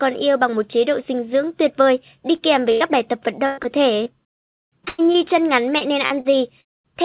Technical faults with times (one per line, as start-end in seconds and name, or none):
2.36-2.40 short concealed packet loss
2.72-2.91 burst of packet loss
3.46-5.16 repeated packet loss (robotic sound)
5.78-6.66 repeated packet loss (robotic sound)